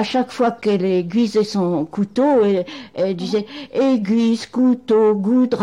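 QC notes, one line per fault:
Nothing stood out on listening.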